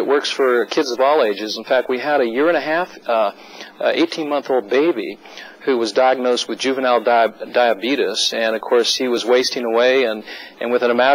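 At 9.17 s the audio jumps forward with no gap, as if a tiny slice was cut out and the two sides butted together. That's most likely a dropped buffer (overrun): the software didn't pick up a block of samples before the hardware overwrote it, so that chunk is simply gone rather than replaced by silence. Only a few milliseconds go missing here, so it's a very brief skip in the sound.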